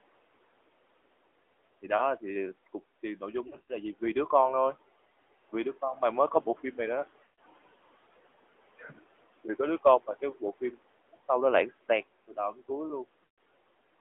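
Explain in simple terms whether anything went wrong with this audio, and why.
Several things went wrong. Throughout, the call passed through the AMR narrowband mobile codec, which drops everything above about 3.5 kHz, so the speech sounds muffled, buzzy and somewhat synthetic.

A noise suppressor also runs the whole time, pushing down the steady room noise. The background sinks between words and rises under them, and the speech can sound thin.

Lost AMR speech frames, where radio errors corrupted pieces of the signal, occur at 3.48–3.75, 7.24–7.39, 11.16–11.21 and 13.24–13.38 s. The phone fills each gap by stretching the last sound, which warbles and fades before the speech returns rough.

Speech cut by the noise suppressor, where it mistook quiet parts of the speech for noise, happens at 8.76–8.98, 10.07–10.42 and 12.28–12.70 s. Soft sounds and word endings come out swallowed and faint there.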